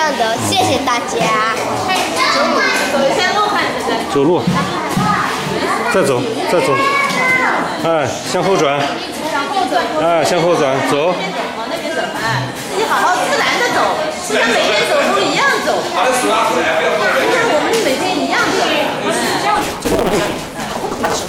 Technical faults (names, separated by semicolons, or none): block size mismatch (truncated)